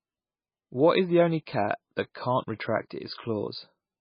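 Across the whole speech clip the treble stops sharply at about 5.1 kHz, and the remaining sound is heavily watery and swirly, with weak frequency components flickering in and out from frame to frame. The likely cause is heavy MP3 compression at a very low bitrate, which fits roughly 17 kbps: starved of bits, the encoder cuts everything above a fixed frequency and drops quiet detail, leaving a dull, smeared, unstable result.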